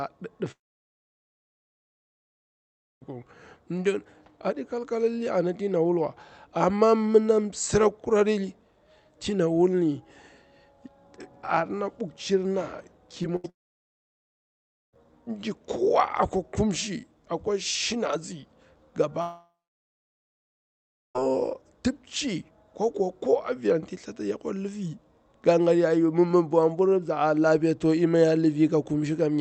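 From 0.51 to 3.03 s the sound cuts out, a brief fading fill and then silence for about 2.5 s; a long network dropout is the likely cause. Around 13.23 to 13.26 s there's a short concealed packet loss: about 20 ms never arrived, so the receiver patched it by extending the previous sound, leaving a quick smear. Then from 13.36 to 13.46 s comes a burst of packet loss, about 80 ms gone, heard as a held buzz or hiss that fades before the audio picks up further on. Right after, 13.50 to 14.95 s goes quiet for about 1.4 s, likely another long network dropout. The same thing happens again from 19.22 to 21.21 s, with a short fading tail and then roughly 1.9 s lost, again likely a long network dropout.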